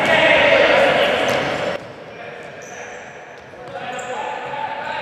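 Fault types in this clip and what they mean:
Sudden gain jump: at 1.76 s the level drops about 12 dB in one sample, likely an unramped gain change; waveform amplitude and spectrogram brightness step down together, noise included.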